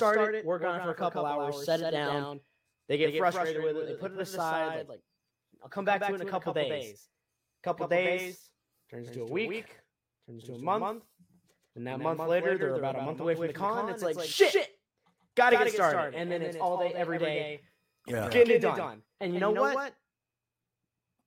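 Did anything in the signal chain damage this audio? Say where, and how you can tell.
Yes. Throughout the speech, every sound is followed by a flat, full-band second copy around 150 ms later and roughly 5 dB quieter, with no decay or room colour. This doubled audio track is likely a slower second capture path or misaligned edit mixing both copies.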